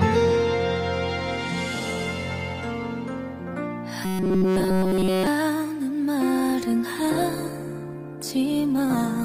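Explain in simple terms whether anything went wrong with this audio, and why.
Two things go wrong in this audio.

From 4.05 to 5.27 s, the sound turns into a stiff, metallic buzz at about 188 Hz. This is robotic sound from repeated short buffers. The likely cause is new audio arriving too slowly. To fill the gaps, the software keeps replaying a tiny slice, about 5 ms long, and skips the real audio. All of this stretch is made of repeats. The repeat rate becomes the buzz you hear.

From 6.36 s to the end of the clip, there is a call bitrate drop. The connection told the encoder to use far less data. With less data, the sound is stored more roughly, so it can turn rough, watery or muffled. Here the reduced quality lasts the whole final stretch, nearly 3 seconds. It never recovers before the clip ends.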